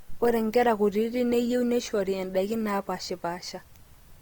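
From start to finish the speech carries a grainy, rough texture with a noisy sheen on voiced sounds, the mark of Opus compression as the likely cause. The full band survives, with content reaching about 20.2 kHz, so this isn't the muffled, hoarse narrowing of a speech-mode encoder. Under a tight bit budget, around 24 kbps, the encoder fills starved bands with folded or noise content instead of leaving holes, which is why the damage sounds like grit rather than the watery swirl MP3 produces.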